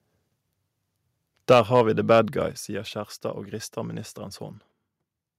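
From 1.5 to 1.81 s the loudest syllables turn harsh and crackly, their peaks flattened where the signal would have gone about 4 dB past full scale, with a small share of the waveform squared off. This is microphone overload, likely from an input volume set too high for the converter. At 1.53 s, inside that burst, voice and background together drop by about 3 dB in a single step, a microphone volume step-down, likely the call software reacting to the clipping by lowering the device's input level. The same gritty edge returns from 2.11 to 2.18 s, now about 2 dB over the limit and again clipping only a small fraction of the samples, another microphone overload, likely from the level still being too hot after the first cut. At 2.52 s the whole sound falls abruptly by about 6 dB, a second, larger microphone volume step-down, likely the software trimming the input gain again after the renewed distortion.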